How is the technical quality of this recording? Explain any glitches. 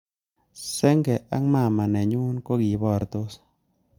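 No glitches or technical faults can be heard anywhere in the recording.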